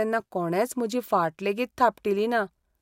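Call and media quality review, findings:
No call or media quality findings to report for this speech clip.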